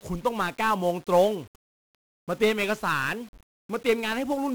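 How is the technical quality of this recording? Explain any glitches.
The technical quality is poor. Heavy 1-bit DFPWM compression runs through the whole speech recording, from start to finish. DFPWM keeps only a single bit per sample, which pushes an adaptive level up or down, so the waveform is a rough staircase approximation. That leaves dense, broadband quantisation noise riding on the voice, heard as a constant fuzzy crackle with the upper frequencies swamped by hiss. The grain follows the signal, at a rate around 48 kbps. That sets it apart from steady tape or preamp hiss. Unlike transform-codec artefacts, it has no swirly, warbling tones.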